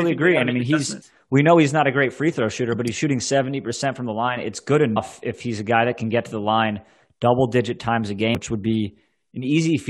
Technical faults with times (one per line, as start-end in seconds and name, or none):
1.01 damaged data in a compressed stream
4.96 damaged data in a compressed stream
8.35 damaged data in a compressed stream